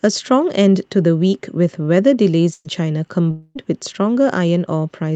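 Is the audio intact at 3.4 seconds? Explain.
No. From 3.31 to 3.58 s the speech breaks off in what is likely a long network dropout: the receiver fills about 243 ms by stretching the last sound into a fading buzz, ending in a brief silence, and about 240 ms of speech is lost before it resumes.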